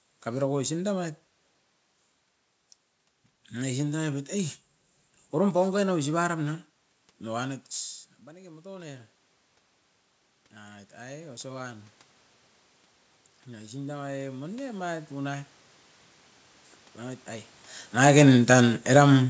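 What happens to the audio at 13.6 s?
At 13.6 s the level is partway through an automatic gain rising event, which runs from 13.48 s to 15.58 s. The automatic gain control judged the incoming signal too quiet and stepped its gain up gradually, by about 4 dB over those two seconds. Because the gain acts on the whole microphone signal, the speech and the room noise beneath it swell together, giving a slow, even lift in loudness rather than a sudden jump.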